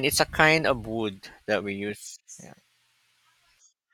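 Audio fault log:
No faults detected in this speech recording.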